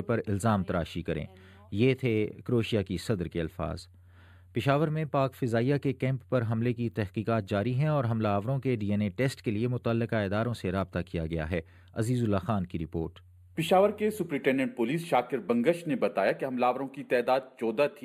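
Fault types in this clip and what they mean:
channel delay (comb filtering): One channel arrives roughly a tenth of a millisecond late, which fits an offset of only a few samples, before both are summed to mono. Cancellation carves evenly spaced notches from around 5 kHz upward, leaving the audio hollow and dulled throughout.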